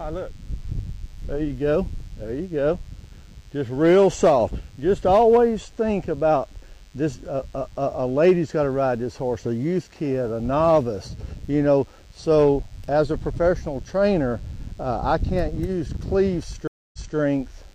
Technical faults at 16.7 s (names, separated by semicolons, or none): DECT cordless phone buzz; stream reconnect